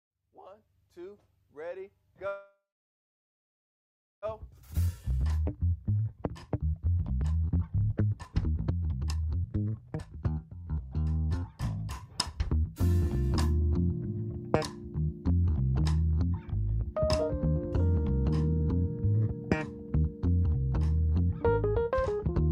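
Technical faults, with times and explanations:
2.27–4.25 s, call audio freeze: the sound breaks into a brief fading continuation of the last sound, then about 1.6 s of silence. It resumes exactly where it stopped, with nothing missing, likely because packets were held up and the jitter buffer ran empty.
4.31–12.54 s, jitter buffer speed-up: the audio plays at 124% speed at unchanged pitch and sounds hurried. The receiver trims short pitch-period pieces again and again, shedding about two seconds of the extra delay the freeze added.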